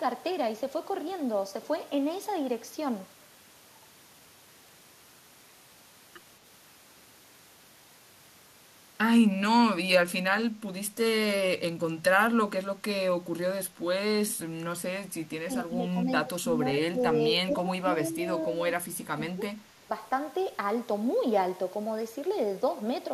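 The speech dips at 10.45 s, then again from 15.44 to 17.9 s, at 18.1, 18.46, 19.16 and 19.79 s. Drops reach about 15 dB. This is speech suppressed in double talk, likely an echo canceller turning down overlapping speech.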